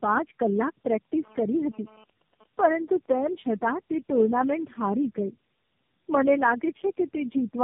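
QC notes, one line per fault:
Throughout: tandem speech coding. The speech is rough, muffled and warbly, with nothing above 3.5 kHz. This points to about four low-rate speech codecs in series, AMR-NB among them. Each re-encodes the previous stage's already degraded output, so the artefacts compound.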